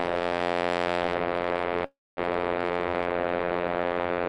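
A music clip with a call audio freeze from 1.85 to 2.19 s. The last sound carries on briefly as a fading buzz or hiss, then goes silent for about 230 ms, likely because packets stalled and the jitter buffer ran dry. What sets it apart from a dropout is that nothing is lost: the music resumes exactly where it stopped, so everything after 2.19 s arrives about 317 ms late rather than skipping ahead.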